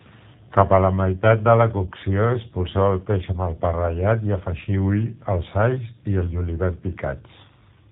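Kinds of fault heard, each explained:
G.729 codec: The speech has passed through a low-bitrate VoIP codec, and the damage is plainly audible. Rather than storing the waveform, this codec models the voice as a vocal tract filter plus a pitch predictor, with a few pulses per frame. The sound fits an 8 kbit/s G.729A stream. Everything above 4 kHz is gone, so the voice sounds narrow and dull. Its texture is rough and slightly synthetic throughout.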